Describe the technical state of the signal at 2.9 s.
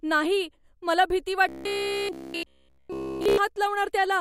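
At 2.9 s you're inside a stretch of robotic sound from repeated short buffers, running from 1.49 to 3.38 s, right after "नाही मला भीती". The speech collapses into a rigid metallic buzz at about 66.8 Hz, likely from one roughly 15 ms buffer being replayed over and over in place of the missing audio.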